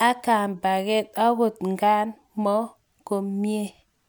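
Speech recording, no technical faults detected.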